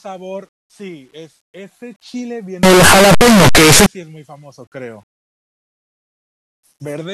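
From 2.63 s to 3.86 s the speech turns into a blast of loud, harsh distortion, with quiet stretches as loud as everything else. The likely cause is signed and unsigned mixed up in the 8-bit samples, flipping the top bit so every zero crossing leaps across the full range.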